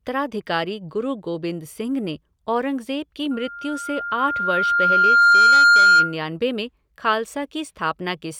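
A speech recording with a loudspeaker feedback squeal from 3.31 to 6.16 s: a 1.4 kHz tone swells over roughly two seconds to sit about 15 dB above the voice. The mic is hearing its own speaker, and the loop gain at that frequency has passed unity.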